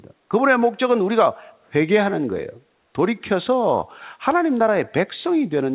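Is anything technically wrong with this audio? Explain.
No, nothing technically wrong can be heard here.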